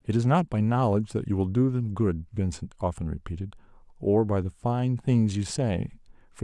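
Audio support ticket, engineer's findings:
Listened to the whole speech clip and nothing turned up to chase, so no findings to log against it.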